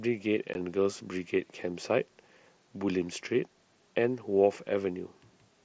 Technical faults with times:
0.54 unconcealed Bluetooth headset packet loss

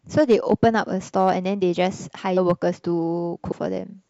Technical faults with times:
0.19-0.79 hard clipping
1.17-1.30 hard clipping
2.36 compressed frames skipped
2.50 hard clipping
3.51 compressed frames skipped

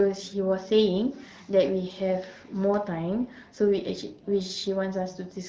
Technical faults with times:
none

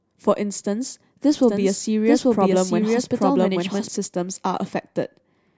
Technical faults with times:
1.43-3.89 doubled audio track

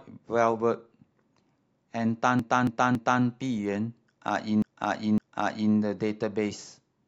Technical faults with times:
2.39-3.23 repeated frames
4.62-5.74 repeated frames

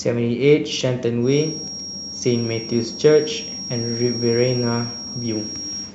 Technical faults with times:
1.19-5.94 feedback whistle

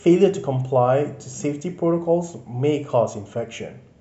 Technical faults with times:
none

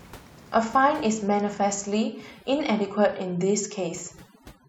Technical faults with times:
1.97-4.69 overdone noise removal

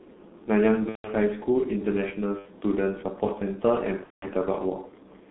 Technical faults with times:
0.00-5.31 G.723.1 codec
0.89-1.14 VoIP packet loss concealed by the speech codec
2.39-2.50 VoIP packet loss concealed by the speech codec
4.04-4.32 VoIP packet loss concealed by the speech codec

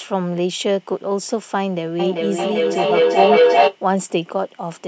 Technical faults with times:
1.99-3.79 feedback echo between two devices

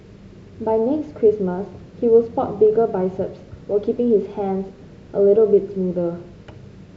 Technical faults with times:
none

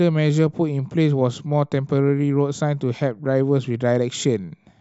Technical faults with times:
none

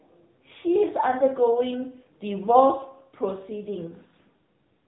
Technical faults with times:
0.00-4.88 AMR narrowband mobile codec

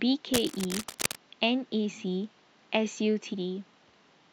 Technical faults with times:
0.34-1.15 cable scratch noise
3.33 damaged data in a compressed stream

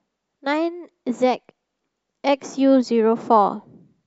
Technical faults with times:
none

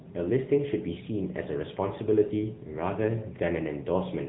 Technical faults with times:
0.00-4.28 AMR narrowband mobile codec

